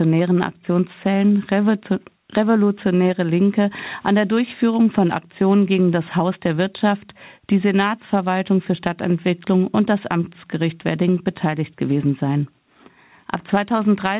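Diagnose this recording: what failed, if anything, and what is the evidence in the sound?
Nothing in this speech recording has failed: it arrives through a call path whose content stops at 4 kHz, a narrowband limit that fits a 64 kbps G.711 mu-law telephone codec, with no dropouts, clicks, level jumps or timing disturbances anywhere in the signal.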